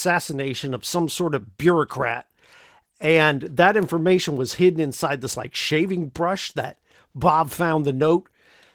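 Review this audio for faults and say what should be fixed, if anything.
Opus voice compression runs through the whole speech clip. The lower band sounds coarsely coded and hoarse, with a top layer above 8 kHz, consistent with hybrid SILK-plus-CELT coding at a rate that fits about 16 kbps. Prevent it by encoding at a higher bitrate or keeping an uncompressed master.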